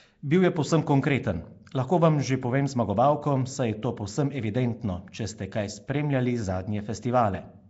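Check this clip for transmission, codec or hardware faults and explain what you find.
One codec fault runs through the whole speech clip: Nellymoser compression. Throughout, speech has a rough, hissy halo and a smeared, underwater quality, with nothing above 7.7 kHz. The cause is likely the Nellymoser Asao codec, which spends a fixed two bits per sample on short blocks. Weak bands get no bits and are filled with noise. The damage fits a bitrate around 32 kbps.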